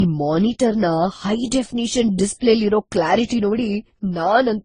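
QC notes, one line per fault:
Throughout: transcoding between lossy codecs. The speech carries several layers of coding damage at once, each stage's artefacts heard together on top of the earlier ones, likely from a low-bitrate Opus-style encode passed through an AAC-type stage and then Vorbis. Each later encoder spent bits reproducing the earlier artefacts. On a spectrogram, energy stops dead at about 9.9 kHz, with patchy, blocky holes below it.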